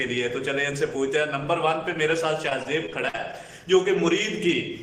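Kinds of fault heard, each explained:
Repeated packet loss (robotic sound): from 2.49 to 3.35 s, seven short holes, the longest 51 ms, are patched by stretching preceding sound, leaving choppy audio with pieces missing.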